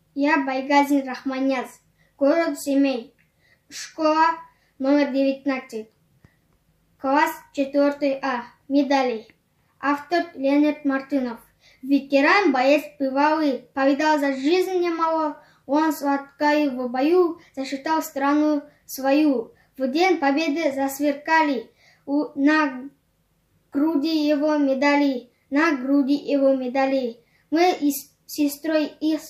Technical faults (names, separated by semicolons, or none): none